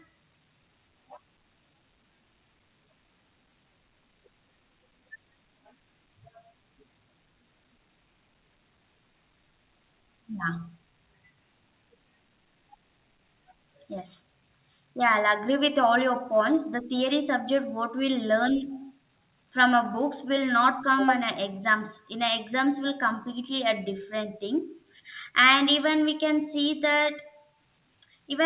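No technical faults can be heard anywhere in this speech clip. It has come through a WebRTC call path, and the band stops at 4 kHz, which fits narrowband G.711 A-law coding.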